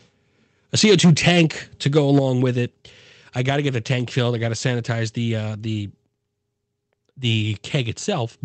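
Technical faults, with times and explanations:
0.78–1.42 s and 1.86–2.19 s, microphone overload: the loudest speech turns harsh and crackly, with flattened peaks. The likely cause is an input level about 6 dB, then about 3 dB, past the converter's limit, clipping several percent of samples in the first stretch and fewer in the second.
0.85 s and 2.19 s, microphone volume stepped down: speech and background abruptly fall in level by about 2 dB, then about 7 dB, each time during or right after a distorted peak. This is likely the call software cutting the device's input gain in single steps as it reacts to the clipping.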